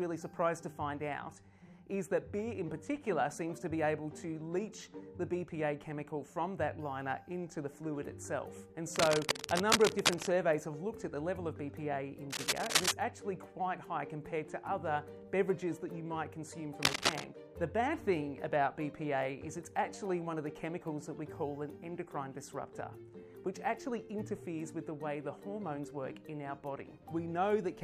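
Cable scratch noise appears at 8.94–10.28 s, 12.30–12.92 s and 16.82–17.24 s: dense, uneven scratching bursts, first at about the sound's own level, then somewhat louder. They likely come from a worn cable or connector being moved, its contact resistance fluctuating rapidly.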